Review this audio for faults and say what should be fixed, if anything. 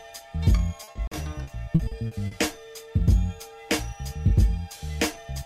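Repeated packet loss (robotic sound) runs from 0.83 to 2.34 s. Eight gaps fall in this stretch, each 40 ms long, so 320 ms of audio is missing. Each hole is covered by stretching the last received sound forward. The holes come close together, so the patched sound turns choppy and robotic. About 21% of the span is concealed. To prevent it, use a steadier network link with a larger jitter buffer, or add forward error correction.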